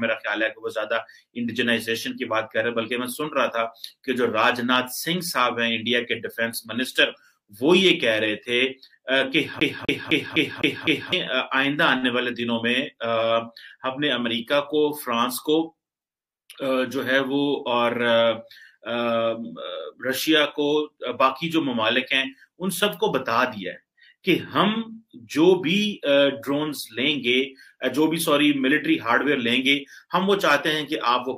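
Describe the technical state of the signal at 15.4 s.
At 15.4 s the signal is intact, with no dropout, distortion, clicks or other technical fault audible at that point.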